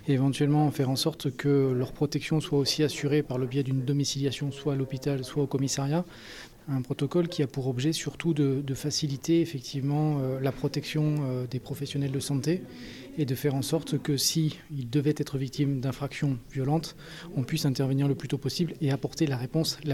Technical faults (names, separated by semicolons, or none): none